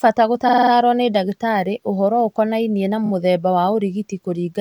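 Repeated frames: a short run of compressed frames was decoded again and again. From 0.47 to 0.71 s, just before "nĩ ndagĩtarĩ ũhoro ũkonainie", a 46.4 ms block plays five extra times, which fits two frames, adding 232 ms of rapid stutter. From 3.05 to 3.10 s, after "ndagĩtarĩ ũhoro ũkonainie na", a 23.2 ms block repeats twice, adding 46 ms, as a brief flutter.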